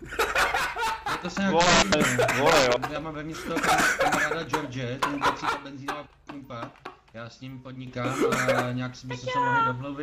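From 0.57 to 1.25 s, the level falls abruptly by about 6 dB, then recovers. The same drop returns from 5.50 to 7.87 s. This is likely one channel drops out. Once the stereo pair is summed to mono, shared material loses half its level, and anything only in that channel vanishes.

At 6.85 s, inside the second drop, compressed frames are skipped. Roughly one frame, about 20 ms of audio, never plays. The frames are 23.2 ms long, so the sound jumps ahead by that much.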